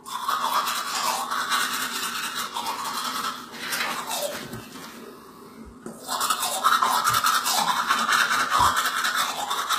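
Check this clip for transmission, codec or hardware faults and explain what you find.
Two problems here: a codec coloring the whole clip, and a steady tick running nearly end to end.

HE-AAC compression runs throughout. The treble sounds rebuilt rather than real, with nothing above 14.9 kHz and plainly audible damage. That's likely HE-AAC at a low rate, consistent with something like 20 kbps, where the top band is copied up from lower frequencies and shaped by a coarse envelope. The upper partials don't line up with what's below, so bright content comes out gritty and a bit metallic.

Clock slip clicks run from about 0.18 s to 9.68 s, a faint tick roughly every 0.15 s, around seventy of them. It's likely two devices on free-running clocks with no sync between them. The mismatch, something on the order of 150 ppm, piles up to a whole sample every so often, and one sample gets dropped or repeated. 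You hear each slip as a small regular tick, most obvious on louder, sustained material.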